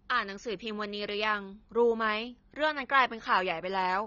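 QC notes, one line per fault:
Throughout: AAC compression. The speech was likely encoded with AAC-LC at a low bitrate, around 24 kbps judging by the damage, so nothing survives above 6.9 kHz. The audio sounds dull and smeared, with plainly audible warbling and fizz on sibilants.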